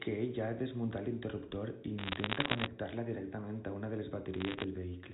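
From 1.98 to 2.67 s and again from 4.34 to 4.64 s, bit errors on a digital phone line flip individual sample bits, producing sharp crackling ticks over otherwise unchanged telephone-band speech.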